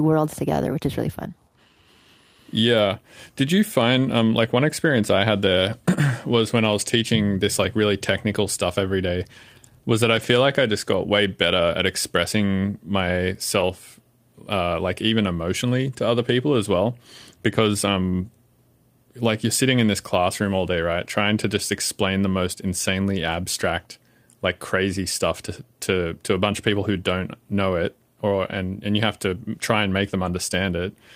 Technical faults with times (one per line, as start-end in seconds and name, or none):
10.15-10.25 lost packet rebuilt from error correction
13.59 lost packet rebuilt from error correction